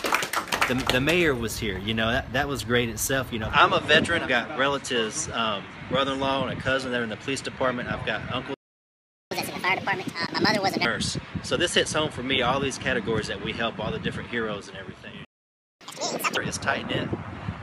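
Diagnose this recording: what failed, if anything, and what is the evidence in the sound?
Input switched to a poorer device at 3.53 s, at the capture stage: the band narrows and a noise floor appears about 35 dB down, with no gap or level jump. A device change is the likely cause.

Playback stall at the playback buffer: output goes silent from 8.54 to 9.31 s (0.77 s) and again from 15.25 to 15.81 s (0.56 s), likely from buffer underrun.

Catch-up at higher speed follows each stall. The player resamples its backlog at 1.5x from 9.31 to 10.85 s, raising pitch about seven semitones, then at 2x from 15.81 to 16.37 s, about ten semitones.

A 16 ms block of digital silence at 10.27 s, inside the first catch-up, cuts the sound out and back with no fade. The output buffer likely went unfilled at the driver or buffer stage.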